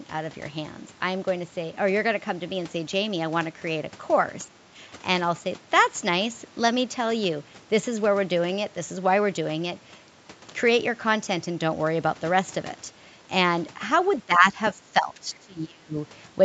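At 4.45 to 4.57 s and again at 14.26 to 15.97 s the speech sinks, about 10 dB then about 25 dB: likely speech suppressed in double talk by an echo canceller.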